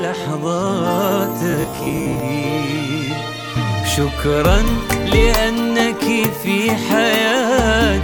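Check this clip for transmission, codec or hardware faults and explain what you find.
One fault: robotic sound from repeated short buffers, 1.51 to 2.20 s. Audio likely arrived too seldom, so the last 15 ms or so was looped to fill the gaps and made up about half the signal. The looping forces a rigid, metallic buzz at 66.8 Hz.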